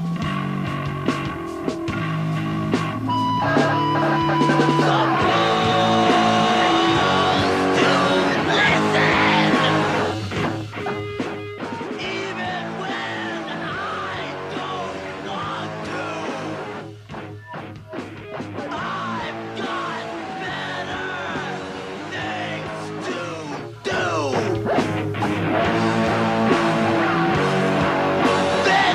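Zipper noise runs from 10.32 to 11.76 s, where the level drops by roughly 10 dB in 2 dB steps, about four per second, each leaving a small click. The waveform envelope descends as a staircase, and the spectrogram shows thin vertical lines at every step.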